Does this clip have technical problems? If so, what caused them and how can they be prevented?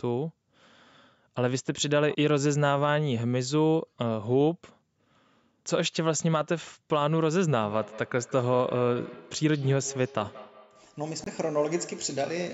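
Yes. A feedback echo between two devices starts at 7.59 s and lasts to 12.53 s: a second nearby device replays the call, and this microphone picks it up again. The sound returns about every fifth of a second, peaking about 18 dB below the speech. Keep only one device joined to the call in each room, or mute the other device's speaker and microphone.

At 11.24 s the audio cuts out until 11.28 s and then resumes further on, as if it had kept playing. The likely cause is a Bluetooth dropout, with packets reaching the headphones too late and being discarded. Keep the headphones close to their source and away from other wireless traffic or obstructions.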